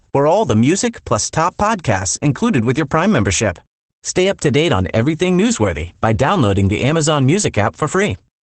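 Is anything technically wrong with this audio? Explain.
Yes. Opus voice compression runs throughout: the SILK coder discards everything above 8.6 kHz and coarsely models the excitation, leaving speech muffled, hoarse and faintly robotic, consistent with roughly 12 kbps.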